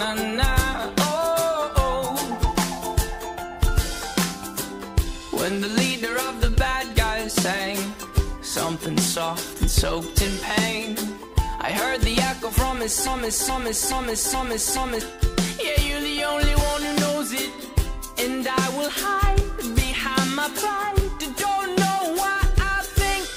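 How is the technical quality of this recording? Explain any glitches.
A broken-record loop disrupts the recording. From 13.07 to 15.01 s, a 0.42 s fragment repeats five times back to back, stuttering mechanically while the audio that belonged there never plays. Likely cause: the player, encoder or stream stalled and kept resending its last buffered fragment.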